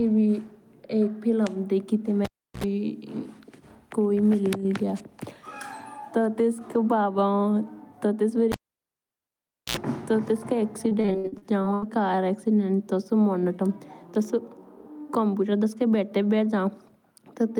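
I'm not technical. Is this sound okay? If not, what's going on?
No, there are two kinds of problem in this speech recording.

The first is a cable pulled and plugged in, which happens twice. At 2.25 s, right after "फिल्म देखी तो", there is a pop, then about a third of a second of near silence, a short burst of low mains buzz (60 Hz, lasting about 70 ms) as the plug goes back in, and another pop as the sound returns at 2.64 s. The same thing happens from 8.52 to 9.77 s, but the silence lasts about 1.2 s. You can tell it's a cable from the clean gap framed by pops and that brief hum.

The second is repeated packet loss (robotic sound), from 10.89 to 11.84 s, just before "कार एक्सीडेंट". Here the sound doesn't go quiet in one block. Instead it breaks up into 11 tiny holes, the longest about 80 ms. Each hole is filled by stretching out the sound just before it, so about a third of that stretch is patched-in filler. 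That makes it choppy and robotic, with no pops, no hum and no clean silence, which is how it differs from the cable fault.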